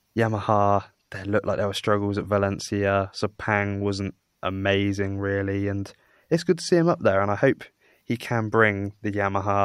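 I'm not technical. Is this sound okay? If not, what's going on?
Yes, there's nothing technically wrong to hear in this recording. No glitches or interruptions come up anywhere in it.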